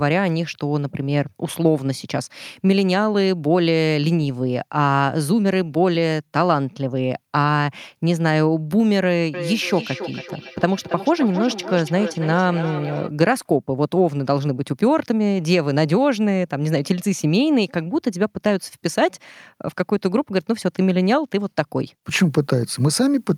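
From 9.34 to 13.12 s, two devices on the same call feed each other, causing feedback echo between two devices: speech returns roughly every 300 ms, thinner and ringing, peaking about 11 dB below the voice. At 17.21 s, a flipped bit, a bit error spike, briefly throws the waveform far off and back, which points to a single corrupted sample heard as one sharp, broadband tick.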